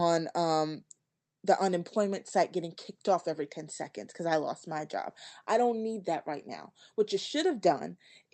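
Listening to this speech clip, nothing stood out as a technical problem.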